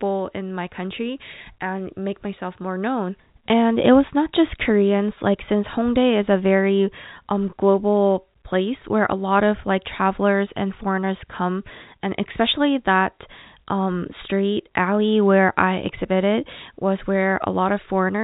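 No faults detected: the speech carries the expected G.711 A-law telephone band limit at 4 kHz with nothing beyond what that coding normally imposes.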